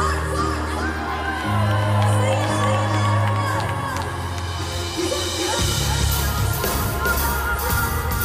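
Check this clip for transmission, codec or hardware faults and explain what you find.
Two faults are audible.

Doubled audio track, throughout: a second full-band copy trails about 0.4 s behind, roughly 5 dB quieter, with no reverb tail. This is likely an extra, slower capture path mixed back in.

Word clock ticks, from 0.30 s to 8.23 s: around thirty sharp ticks of uneven strength arrive about every 0.3 s. An unlocked receiver clock drifting by roughly 100 ppm slips past the sender's, dropping or repeating a single sample at each crossing.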